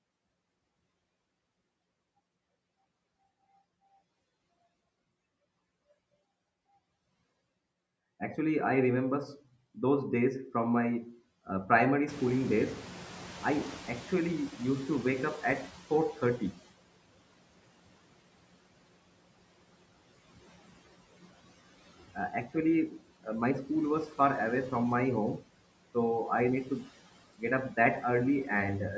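Noise suppressor artifacts run through the whole clip. The suppressor estimates the steady background in each frequency band and pulls those bands down frame by frame, by about 17 dB here. The result is a background that drops away in the gaps between phrases and swells back up underneath the speech.

From 12.08 s to 16.56 s, just after "from my uh primary", the noise suppressor is catching up. At around 12 s the room noise jumps by roughly 20 dB. The suppressor's noise estimate still reflects the quieter floor from before, so the louder background comes through with little reduction at first. Over the next 4.48 s the estimate adapts, and the noise sinks by about 13 dB until it sits back down.

From 26.65 s to 26.89 s, between "so I need" and "get up", there is speech cut by the noise suppressor. The suppressor mistook part of the speech for background and turned it down with the noise, by about 8 dB at the deepest point. 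Only around a tenth of a second of sound is affected in total, but that short stretch comes across as swallowed and faint.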